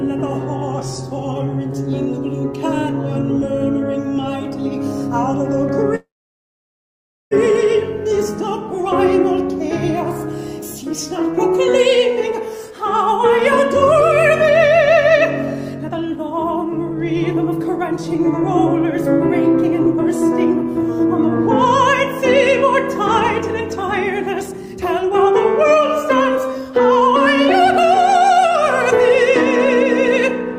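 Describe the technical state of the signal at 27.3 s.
At 27.3 s a jitter buffer speed-up is under way, from 23.76 to 29.24 s. Short pitch-period pieces are cut repeatedly, about 0.4 s in total. The sound runs 7% faster at unchanged pitch.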